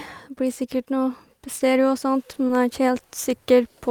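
Short concealed packet loss at 2.34 to 2.38 s and again at 2.47 to 2.51 s: each time about 20 ms of the speech arrived too late to decode, so the receiver extended the preceding sound to bridge the gap, leaving two brief smeared wobbles close together.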